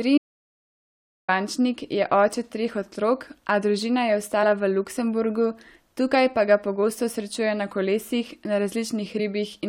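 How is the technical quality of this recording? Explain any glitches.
The recording has three glitches: one long gap near the start and two brief digital blips later. At 0.18 s an audio dropout to silence begins, likely from the input briefly disconnecting while recording continued, so the speech cuts to dead digital silence until 1.29 s, losing about 1.1 s. At 4.42 s and 9.18 s there is damaged data in a compressed stream. Corrupted frames make the decoder lose sync and hunt for the next valid header, and each time the speech is interrupted by a brief glitch.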